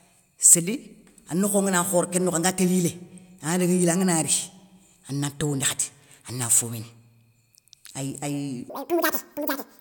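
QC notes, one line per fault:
8.70–9.80 s: audio read two samples at a time (double speed). For the final stretch of this speech clip, the reader treats each pair of samples as one frame, so the material plays at 2x speed and a full octave (12 semitones) higher, with a chipmunk quality. On a spectrogram, harmonics jump to twice their spacing. On the waveform, the syllable envelopes are compressed to half their length.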